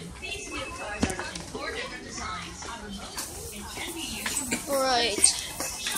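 At 3.19 s the tone shifts abruptly and stays that way to the end: pre-emphasis left on. The treble lift applied before transmission, here the FM 50 µs curve, was never undone by the matching de-emphasis, so highs sit about 10 dB above 1 kHz by 10 kHz. The sound turns thin, bright and hissy. Unlike a fixed treble shelf, the boost keeps climbing from roughly 3 kHz upward, exaggerating the very top most.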